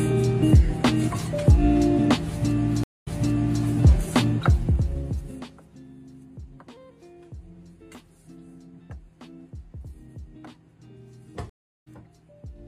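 The audio has two stream reconnects. At 2.84 s it goes silent for 231 ms, then resumes 557 ms earlier, so a stretch repeats. At 11.50 s a 369 ms gap leads to a jump forward of about 0.3 s. The position shift is what separates a reconnect from a simple dropout, because the player restarted its decoder elsewhere in the stream. From 4.29 to 5.88 s, zipper noise appears: the level falls by about 25 dB in 1 dB steps, roughly fifteen a second, and each unsmoothed step ticks audibly.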